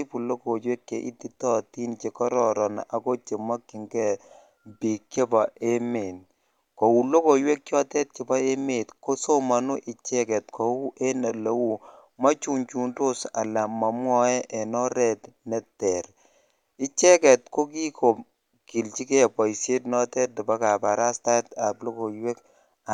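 Speech recording, with no technical faults to report.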